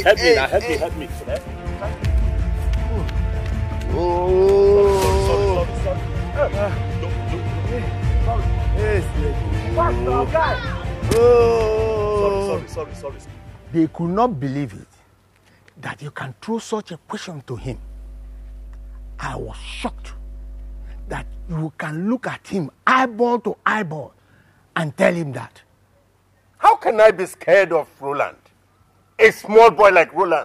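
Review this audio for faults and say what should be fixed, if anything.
There's mains hum from 17.56 to 21.58 s, a steady 50 Hz tone with low harmonics sitting roughly 15 dB under the signal. A ground loop or nearby transformer is leaking the power line into the signal path. To prevent it, break the ground loop and keep cables away from power supplies.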